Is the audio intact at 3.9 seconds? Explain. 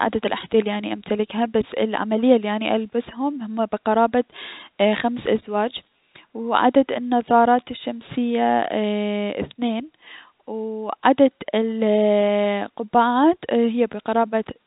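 Yes, the audio is intact at 3.9 seconds, with nothing there beyond the usual G.711 telephone coding, which keeps everything below about 3.8 kHz.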